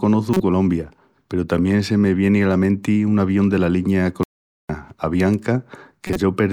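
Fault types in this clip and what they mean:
Corrupt frame decoded: Damaged compressed frames were played instead of being concealed. Misread data put energy at wrong frequencies. A harsh burst lands at 0.34 to 0.40 s, peaking near -5 dBFS. A weaker one hits 6.07 to 6.16 s, near -10 dBFS.
Playback stall: The speech cuts out right after "un avión dela linia". Silence runs from 4.23 to 4.69 s, about 0.46 s. The sound then resumes. The player likely starved of data or was briefly blocked, halting output until it recovered.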